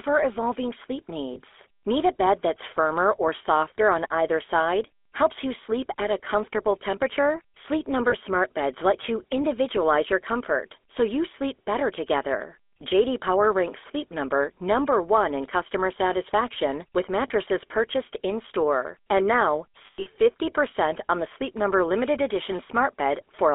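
The whole recording carries GSM full-rate codec damage: a buzzy, gravelly roughness from the pulse-driven vocal tract model, consistent with a 13 kbps coder. Spectrograms show energy confined to about 300 Hz–3.5 kHz, with smeared, grainy harmonics.

Lost GSM frames occur at 1.34 s after "evolving sleep", 8.10 s, and 17.28 s after "in customer satisfaction with". Each is a single 20 ms frame refilled from the previous one, producing a brief metallic ring. At 19.86–20.08 s, nine frames are scattered across 200 ms, the longest run lasting about a tenth of a second. The waveform shows repeated, decaying cycles there, and the spectrogram shows smeared bands.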